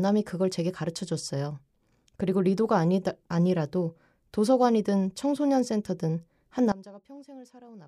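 From 6.72 s to the end of the clip at 7.88 s, the speech drops by about 21 dB and turns faint, its centred body almost gone. The likely cause is one channel inverted, so the matching left and right content cancels when summed to mono.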